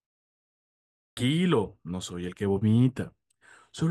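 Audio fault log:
0.97–1.17 s clipped start after a pause. Speech bursts in after 0.97 s of silence. The sleeping output wakes late and swallows the first 200 ms.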